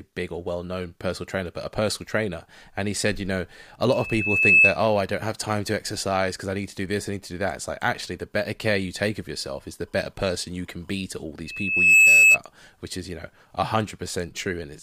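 A piercing 2.6 kHz tone swells within a second to well above the speech from 3.88 to 4.77 s and again from 11.46 to 12.38 s. This is loudspeaker feedback squeal, with the microphone re-amplifying its own loudspeaker until that frequency runs away.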